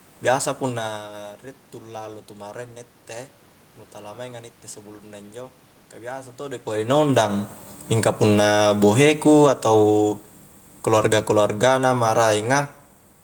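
Automatic gain falling starts at 7.84 s: the gain control judged the input too loud, or its background noise too strong, and pulled its gain down by about 6 dB over the following 2.4 s, to 10.25 s, so the voice and the room noise behind it sink together rather than the talker simply moving, as happens around 6.5 s.

Automatic gain rising interrupts that descent from 8.51 to 8.94 s, a brief lift of about 4 dB as the control briefly reads the input as too quiet. Speech and background swell together for under half a second before the downward pull resumes.

A second automatic gain falling runs from 10.79 to 12.68 s, again about 6 dB down over nearly two seconds, and once more the background noise drops in step with the voice.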